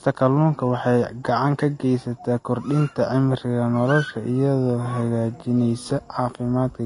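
Speech, with one fault throughout. Nothing sounds above 10.5 kHz. This is likely low-bitrate audio saved at a high bitrate. The sound fits a Vorbis encode near 33 kbit/s, re-saved as MP3 near 192 kbit/s. The higher rate cannot restore the missing top end.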